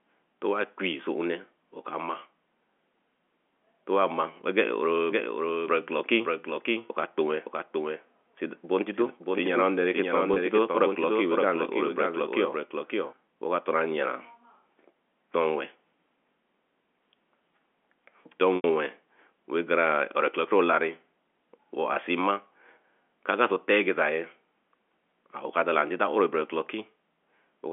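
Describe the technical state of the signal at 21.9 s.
At 21.94 to 21.96 s there is packet loss with pitch repetition. About 20 ms of audio, which fits a single packet, was bridged by repeating the last pitch period. It sounds like a slightly held, buzzy note.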